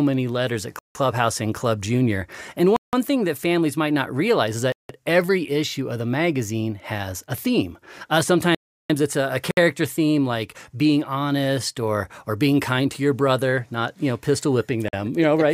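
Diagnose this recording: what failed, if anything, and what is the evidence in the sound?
Bluetooth stall at the wireless link: the speech drops out for 50 to 170 ms at 0.79 s after "many letters at", then at 2.76, 4.72, 9.51 and 14.88 s. Delayed packets likely drained the headphone buffer.

Playback stall in the player: the sound halts for 350 ms at 8.55 s, then resumes. The player likely ran short of data or was briefly blocked.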